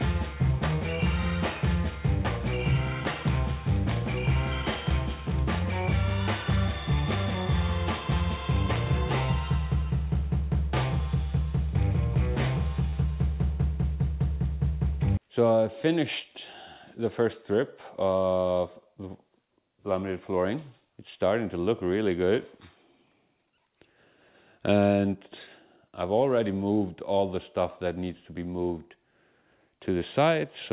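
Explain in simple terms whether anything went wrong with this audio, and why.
One thing went wrong: a short concealed packet loss from 12.90 to 12.94 s. About 20 ms of audio arrived too late, so the receiver filled the gap by continuing the sound just before it. That makes a brief smear or wobble instead of the silent gap or sharp click of a plain dropout.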